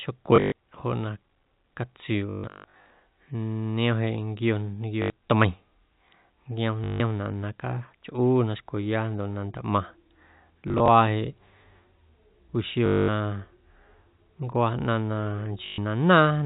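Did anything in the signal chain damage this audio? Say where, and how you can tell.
Yes. Packet loss with last packet repeated, a network fault, hits at 0.36–0.52, 2.3–2.9, 5.02–5.1, 6.84–7.0, 10.68–10.88, 12.86–13.08 and 15.66–15.78 s. Each gap is filled by replaying the previous packet, and longer runs buzz at about 50 Hz, which fits 20 ms packets. The most audio is lost across 2.3–2.9 s, 420 ms over 21 packets. The G.711 A-law telephone band underneath is intact.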